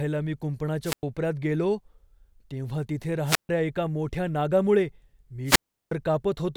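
A speech recording interrupted three times by wireless microphone squelch dropout: at 0.84–1.03 s, at 3.25–3.49 s just after "तेव्हा तिथे" and before "एका मोठ्या नागामुळे", and at 5.45–5.91 s after "एका मोठ्या नागामुळे". Each time the radio link fades, hiss rises, then the receiver's squelch mutes the output for about 102, 141 and 359 ms. On a spectrogram, a smear of broadband noise leads into a blank vertical gap; the waveform flattens to near zero.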